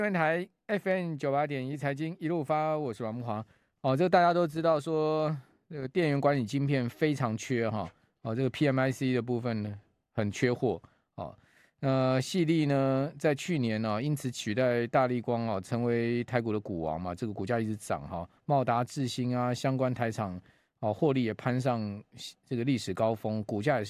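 Nothing in the speech recording points to a technical fault, as the signal runs continuously with no audible interruption, distortion or level problem anywhere along its length.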